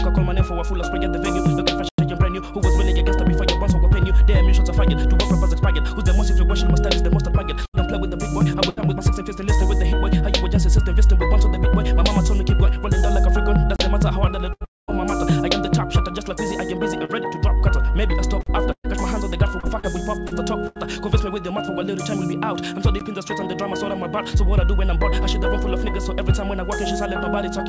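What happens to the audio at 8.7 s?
A burst of packet loss hits from 8.69 to 8.80 s. The receiver concealed the gap with about 72 ms of the last sound, extended and fading, then resumed roughly 80 ms further on. Unlike a plain dropout, the gap is filled rather than silent, and material is skipped.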